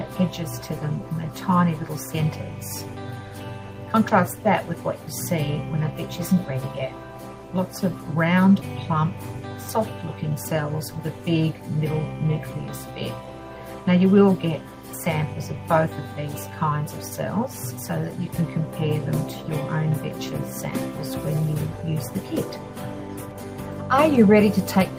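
No dropouts, clipping, glitches or other technical faults can be heard anywhere in the clip.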